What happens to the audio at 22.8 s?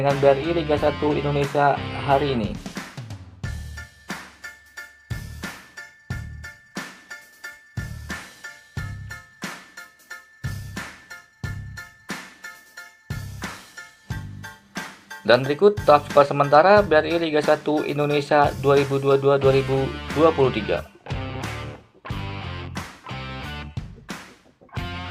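Nothing goes wrong at 22.8 s; the audio plays through that moment intact, with no dropout, click or distortion.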